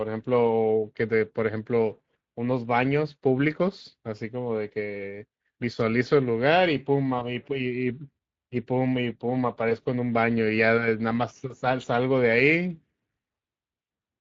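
From start to end, Speex codec damage is plainly audible. Speex is a CELP speech coder. It models the voice as a filter driven by an excitation signal. Here the excitation gets too few bits. The speech sounds noisy and hoarse. The damage comes at around 20 kbps. The highest band sounds like shaped noise more than real detail.

At 7.19 s comes VoIP packet loss concealed by the speech codec. A gap of about 40 ms fits one lost 20 ms frame. The decoder filled it by repeating its last pitch and filter at falling gain. The sound is briefly stretched and then fades. The same fault returns at 9.69 s, lasting about 40 ms. Each time the voice stays weak or distorted for a moment after the audio resumes.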